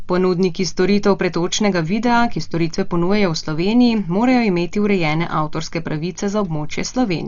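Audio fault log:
Throughout: Dolby Digital compression, heavy. The speech is dull, with nothing above about 7.1 kHz, and a rough, fluttering noise clings around voiced tones. This is likely AC-3 style coding at a low bitrate, around 40 kbps. There the encoder narrows the band and leaves many frequency lines in each block without mantissa bits, and the decoder fills those gaps with dither noise. That noise gives the grainy, unsteady texture, while the cut band takes away the crispness.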